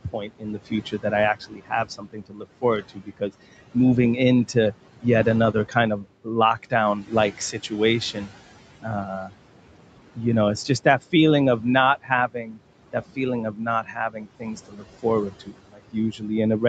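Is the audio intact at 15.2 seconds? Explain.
No. From 10.16 s to the end of the clip, the noise suppressor cuts speech it mistakes for noise, dropping it by up to about 19 dB, so soft consonants and word endings sound swallowed. Throughout the clip, noise suppressor artifacts from a noise reduction of about 18 dB make the room noise, which sits about 15 dB below the speech, dip and swell around it.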